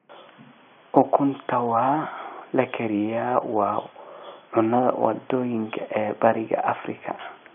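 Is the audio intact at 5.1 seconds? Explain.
Yes, the audio is intact at 5.1 seconds, with only the room's own background noise sitting about 43 dB below the speech.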